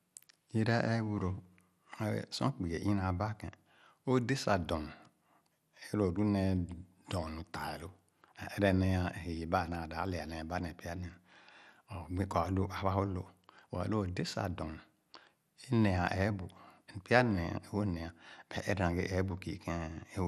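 From start to finish the speech sounds dull and gurgly, with a grainy edge on the upper range that keeps flickering. That's likely MP2 compression at a low rate, roughly 80 kbps, starving the upper sub-bands of bits so they drop in and out.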